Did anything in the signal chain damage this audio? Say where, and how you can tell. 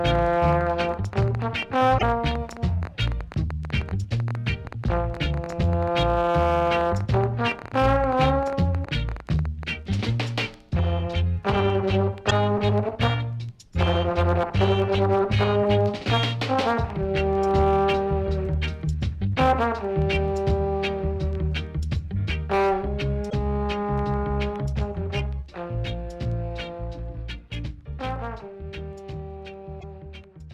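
Yes. A train of clicks runs from 0.1 s to 9.64 s. It sounds like uneven ticking at about 9.5 clicks per second, roughly a hundred in all. The clicks share one shape and peak a few dB above the sound. They continue through the quiet gaps, so they sit on top of the audio rather than coming from it. That points to the analogue wiring or converter stage, with interference from nearby equipment or a faulty connection or power supply the likely cause.

Damaged data in a compressed stream shows up five times: 1.95 to 2.03 s, 8.82 to 8.87 s, 12.27 to 12.32 s, 23.26 to 23.33 s, and 29.77 to 29.84 s. Each is a short chirp or blip lasting 50 to 80 ms. This is a codec or storage fault. Corrupted bytes made the decoder misread frames and lose sync. It then skipped ahead to the next valid frame header.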